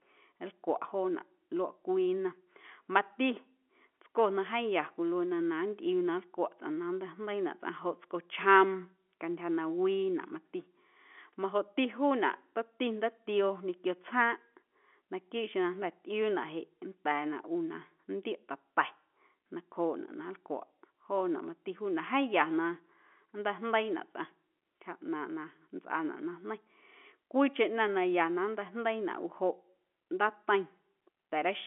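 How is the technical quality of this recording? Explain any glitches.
No technical faults are audible.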